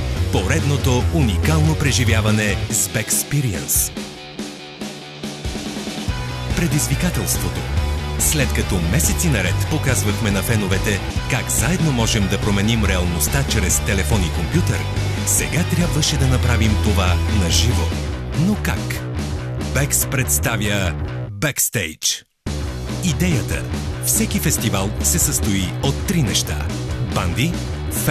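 No technical fault can be heard anywhere in the audio; the signal stays continuous and stable throughout.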